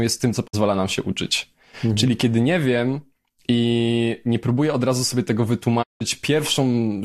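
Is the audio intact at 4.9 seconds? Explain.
Yes, the speech at 4.9 seconds plays through intact, with no dropout, click, distortion or other fault at that moment.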